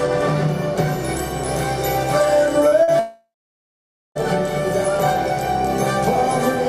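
The audio carries two instances of short concealed packet loss, at 2.67–2.74 s and again at 2.83–2.90 s. Each replaces about 40 ms of missing signal with an extrapolation of the preceding sound, pitch-continued where it was voiced and noise-shaped where it was not, before crossfading back to the received stream. Both register as a brief smear or wobble. Immediately after, from 2.99 s to 4.18 s, comes what is likely a long network dropout, roughly 1.16 s with no usable signal. The concealer first extends the last sound as a decaying buzz or hiss for a few tenths of a second, then gives way to about 0.88 s of silence. Audio resumes at 4.18 s without the missing section, so the part that was lost is never heard.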